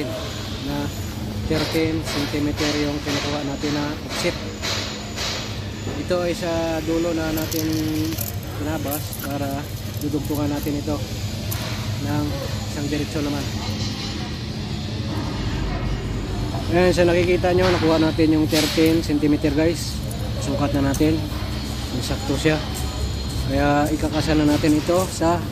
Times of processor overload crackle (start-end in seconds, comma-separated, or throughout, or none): none